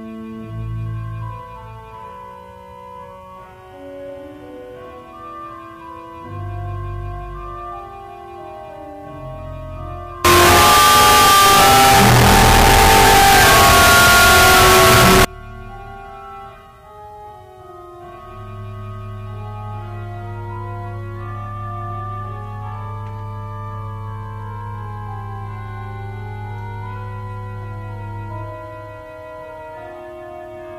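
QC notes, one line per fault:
10.25 to 15.25 s, signed and unsigned mixed up: for five seconds the audio turns into a dense, extremely loud, harsh roar, and quiet stretches come out as loud as everything else. The likely cause is 16-bit samples read with the wrong sign convention, flipping the top bit so every zero crossing jumps across the whole range. Clipping only flattens the peaks and leaves quiet passages quiet. Here the level floor itself is lifted.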